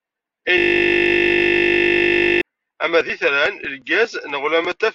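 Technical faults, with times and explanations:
0.58 to 2.41 s, system hang loop: a 20 ms slice repeats exactly, giving a steady 50 Hz buzz until playback resumes at "ama d".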